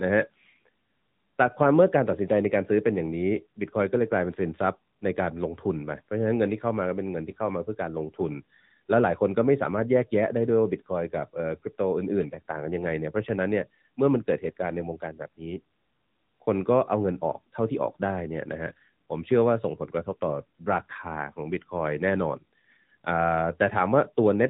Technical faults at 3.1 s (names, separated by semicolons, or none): AMR narrowband mobile codec